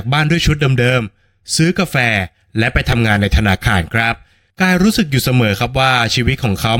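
At 2.92 s and again at 4.14 s the speech has a repeated buffer: fresh audio missed its deadline, so the device replayed the last piece it held. Each piece is about 2.67 ms, which fits a 128-sample buffer, looped twice more at 2.92 s and once at 4.14 s. Far too short to stutter, each is heard as a click or brief buzz. The waveform shows identical short cycles with abrupt seams, and the spectrogram shows a thin vertical broadband streak.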